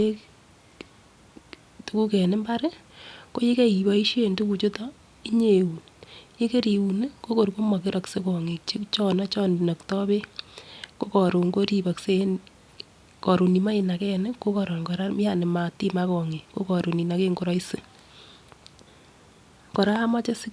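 No technical faults can be heard anywhere in this speech recording. There is nothing to place on a timeline.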